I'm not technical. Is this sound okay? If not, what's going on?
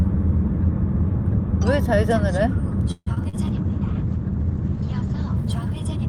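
No. From 2.91 to 3.36 s, repeated packet loss (robotic sound) leaves four brief holes, patched by stretching the preceding audio, so it sounds choppy.

From 3.36 s to the end, a call bitrate drop makes the connection send much less detail, so the audio turns rough and muffled, with the top end cut above 8 kHz.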